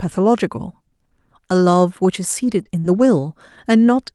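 Speech carried over an Opus call connection ran into a burst of packet trouble between about 2.4 and 3.1 s. Eight packets were lost, but each was recovered from the low-bitrate duplicate carried in the following packet (lost packets rebuilt from error correction). These 20 ms repairs, at 2.43, 2.59, 2.65, 2.75, 2.84, 2.96, 3.00 and 3.12 s, leave no gap. Each one sounds briefly coarser and noisier. Twice, nothing arrived in time for the decoder, and it had to invent the missing audio (short concealed packet loss). The first case, 2.63 to 2.67 s, covers about 20 ms. The second, 2.79 to 2.86 s, covers about 40 ms. In each, the receiver extended the preceding sound and then blended back in, which comes across as a short smear or wobble in the speech, overlapping the rebuilt packets at 2.65 and 2.84 s.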